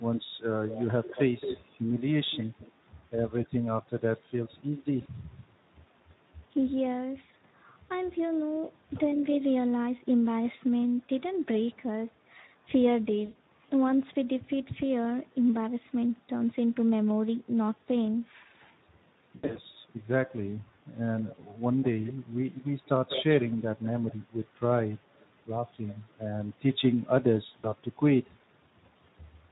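The whole recording carries Speex codec damage, and it's plainly audible: the speech sounds hoarse and grainy, with a noisy edge that points to a bitrate around 11 kbps. At that rate the codec simply doesn't have enough bits to describe the excitation cleanly.

At 5.01 s there's a short burst of VoIP packet loss concealed by the speech codec. About 40 ms went missing, and the decoder covered it by extending its last pitch and filter into a brief smear. The same thing happens at 13.25 to 13.37 s, where roughly 100 ms was lost and the patched sound fades as the decoder lowers its gain frame by frame. From 19.35 to 19.58 s the losses come in several scattered gaps, 140 ms in total with the longest about 80 ms, so the voice is patched over again and again. At 27.59 s another 40 ms drop gives one more brief patched gap.

Between 8.26 and 9.16 s a faint copy of the voice trails in about 220 ms late, sitting far below the direct sound. 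That's an echo leak, most likely from a loudspeaker on one side of the call whose echo canceller didn't fully remove what its microphone picked up.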